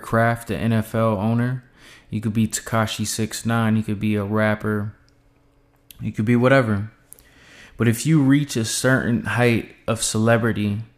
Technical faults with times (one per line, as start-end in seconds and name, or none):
none